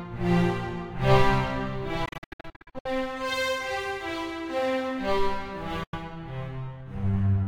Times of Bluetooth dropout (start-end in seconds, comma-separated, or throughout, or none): 2.05-2.86, 5.83-5.95